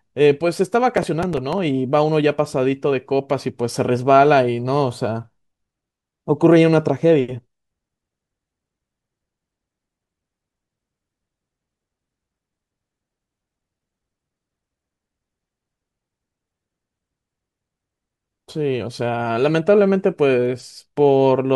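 Speech, with a burst of gritty crackle tearing across the sound from 0.97 to 1.58 s, then clearing abruptly. This is processor overload crackle: the processor fell behind and missed a run of deadlines on very short audio buffers, around 5 ms each, with something like seven misses packed into that stretch. Each miss replayed a scrap of stale audio with hard edges, and those repeated splices are what produce the rough, torn texture.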